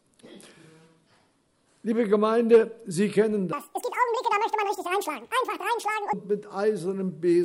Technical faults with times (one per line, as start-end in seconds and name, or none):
3.53-6.13 wrong sample rate